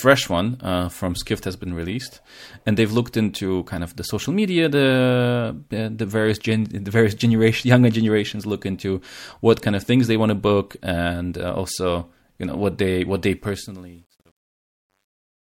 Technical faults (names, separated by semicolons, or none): truncation distortion on a fade